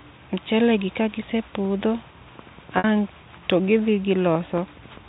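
At 2.78 s the speech breaks up with packet loss with pitch repetition: about 60 ms of audio goes missing, consistent with three lost packets, and the receiver bridges it by repeating the last pitch period, giving a briefly held, buzzy tone that fades before the speech resumes at 2.84 s, all carried over G.711 telephone coding.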